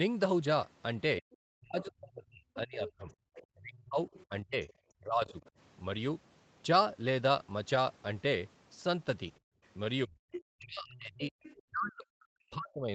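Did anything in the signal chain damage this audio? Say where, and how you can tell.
Yes. The damage is in the call processing stage, at the echo canceller.

Speech suppressed in double talk occurs from 1.2 to 5.35 s and again from 10.05 s to the end. In the first stretch the speech dips repeatedly, for around two seconds in total. At its deepest it falls by about 40 dB. The second stretch shows the same dips. Both the near talker and the far-end audio seem to be active. The canceller likely could not tell them apart, so it turned everything down.

The other side's voice leaking through shows up in three places. From 1.31 to 5.5 s a second voice sits faintly underneath, roughly 25 dB below the speech. From 9.65 to 10.42 s it is much stronger, only around 10 dB under. From 11.43 to 11.62 s there is one brief faint scrap. The likely cause is loudspeaker playback reaching the microphone. The canceller failed to subtract all of it.

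Background gated by the echo canceller occurs from 9.4 to 9.63 s. The room sound drops out for about a fifth of a second, falling by about 38 dB. It comes straight back afterwards. The timing points to loudspeaker activity. The canceller clamped the microphone hard while the far end played, and then released it.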